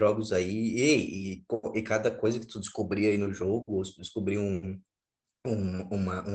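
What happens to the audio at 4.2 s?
Nothing goes wrong at 4.2 s: the speech carries on intact through the call path, with only the ordinary coding character of the link.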